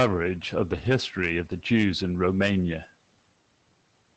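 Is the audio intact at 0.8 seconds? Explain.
No. From 0.73 to 0.87 s, a lost packet rebuilt from error correction plays: about 80 ms of lost audio was replaced with low-bitrate copies carried in the following packets. The sound continues without a gap but turns briefly rougher and noisier, unlike a dropout's silence.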